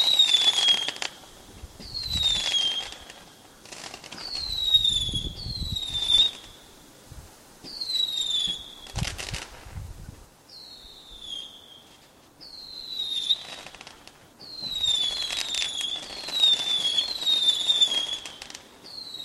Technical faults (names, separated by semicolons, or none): none